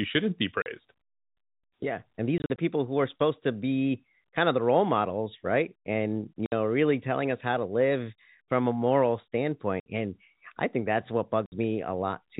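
Packet loss filled with silence chops the audio at 0.62–0.66 s after "shouldn't be", across 2.38–2.58 s in scattered short holes, at 6.46–6.52 s after "models right and you", at 9.8–9.86 s before "and I think that's", and at 11.46–11.52 s. The holes are 20 to 60 ms long, which fits 20 ms packets. On the waveform they appear as flat silent blocks, and on the spectrogram as blank vertical bands.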